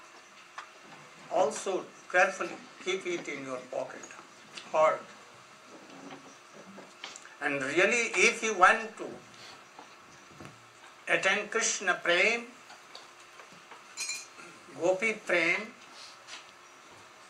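No technical faults are audible.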